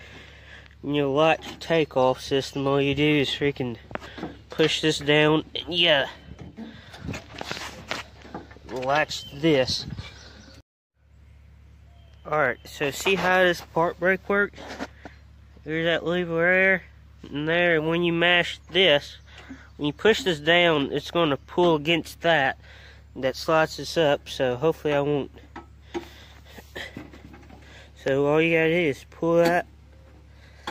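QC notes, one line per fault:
29.47–30.71 s, crude rate conversion: in the last stretch a gritty, inharmonic fizz rides on loud and high content, roughly 30 dB below the signal. The grit fits a 44.1 kHz to 48 kHz change done by repeating the nearest sample, with no filter, so the timing error recurs on a fixed cycle and throws off tones unrelated to the material. Unlike clipping distortion, it doesn't depend on peaks hitting a ceiling, and its tones aren't harmonics.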